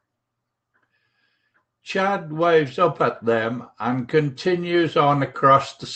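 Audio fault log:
No faults are heard anywhere in the speech. The sound has passed through a WebRTC call path whose codec, likely Opus, limits the top end to about 8 kHz and adds its usual coding noise.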